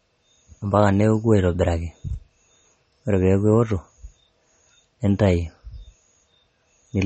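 The speech carries audible MP3 compression from start to finish. Nothing is present above about 8.4 kHz, so the top of the sound is simply missing. The damage is plain. Weak frequency detail flickers in and out from frame to frame, giving a watery, swirly texture. S sounds turn metallic and chirpy. Attacks smear. The likely cause is a low bitrate, around 32 kbps, which forced the encoder to cut the treble and drop detail.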